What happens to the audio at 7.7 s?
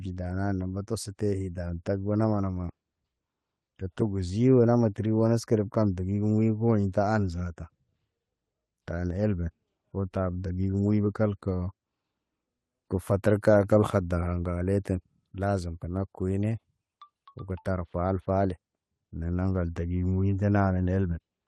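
Nothing goes wrong at 7.7 s: the speech comes through intact, carrying only the ordinary coding character of the call codec, whose band tops out around 12 kHz, which fits an Opus stream at roughly 20 kbps.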